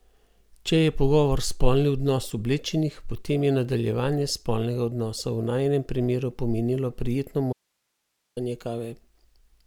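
At 7.53 s, right after "najinem primeru pomenilo prijetno", the speech cuts out abruptly and stays gone until 8.37 s, about 0.84 s. This is an audio dropout to a faint residue: the gap holds only hiss, roughly 55 dB below the speech. The signal was likely lost upstream while the rest of the path stayed live. The hard edges at both ends and the steady hiss rule out a natural pause or fade.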